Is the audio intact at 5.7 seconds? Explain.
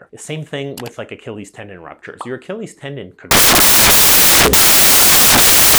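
No. From 3.31 s to the end, it turns into loud, harsh broadband noise: samples built from the wrong bytes, with the reader misassembling each sample so the fast-changing low bits dominate.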